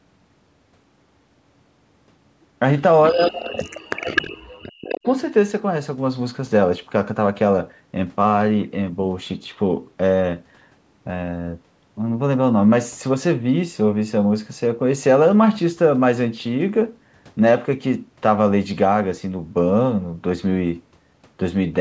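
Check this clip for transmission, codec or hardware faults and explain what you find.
Two call-path faults appear together between 3.1 and 5.07 s, both pointing to an echo canceller struggling while both ends talked at once.

Speech suppressed in double talk, 3.1 to 5.07 s: the canceller likely could not tell the near talker from loudspeaker echo and attenuated everything. Across roughly two seconds the speech sinks and breaks up, with the deepest dips around 40 dB down, so stretches nearly vanish before the level returns after 5.07 s.

Echo leak at 3.27 to 3.32 s, 4.01 to 4.22 s and 4.85 to 4.98 s: residual echo likely slipped past the same canceller and was sent back. Each time, a copy of the sound trails the original by 256 ms, in short scraps. It is about 20 dB down at 3.27 s, about 5 dB down at 4.01 s, and about 15 dB down at 4.85 s. The call's microphone processing removes the lowest bass, and the audio has nothing above 8 kHz.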